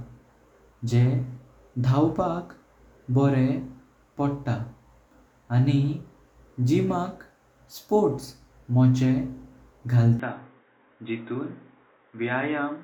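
At 10.20 s the speech abruptly turns dull and boxy and stays that way to the end, with nothing above 3.8 kHz. There is no gap at the change, but the level drops by about 10 dB and a faint new background noise appears, well below the speech. That combined shift in bandwidth, level and noise floor points to an input likely switched to a poorer device. A codec or filter narrowing the band would not also change the loudness and noise at the same moment.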